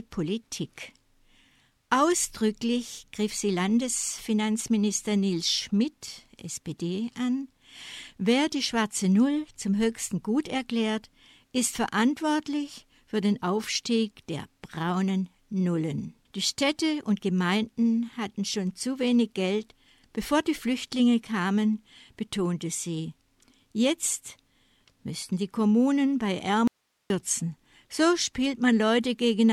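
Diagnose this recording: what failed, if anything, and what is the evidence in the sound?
At 26.68 s the sound cuts out abruptly, and from 26.68 to 27.10 s, about 0.43 s, there is an audio dropout to a faint residue: the gap holds only hiss, roughly 50 dB below the signal, before the sound resumes just as abruptly. Because the hiss persists through the gap, the path after the break stayed live while the source feed was lost. The likely cause is a momentary break in the analogue wiring or a connector upstream of the input stage.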